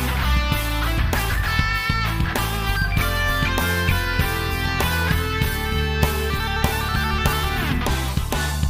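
No technical faults can be heard anywhere in this audio; the signal stays continuous and stable throughout.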